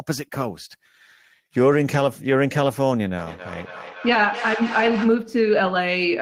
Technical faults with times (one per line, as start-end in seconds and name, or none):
3.18-5.32 feedback echo between two devices